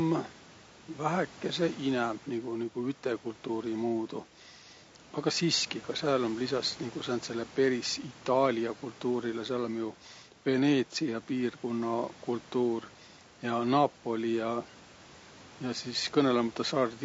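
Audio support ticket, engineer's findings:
Rough, grainy speech across the whole clip, noise filling the gaps between pitch harmonics, top band thin and synthetic. Likely low-delay AAC compression (AAC-ELD): short frames blur harmonics, damage consistent with about 32 kbps. Steady, not bursty like packet loss. Room noise about 26 dB under speech.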